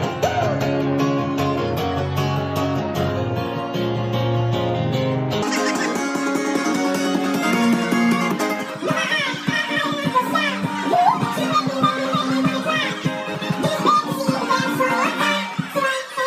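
From 5.42 s to the end at 16.26 s, a section at the wrong speed plays at twice the original rate, pitch shifting up by around ten semitones, so the sound turns high and hurried. The likely cause is playback against a mismatched clock.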